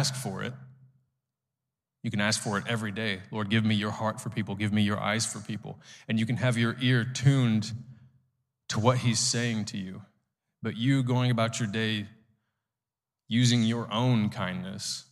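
No technical faults can be heard in the recording.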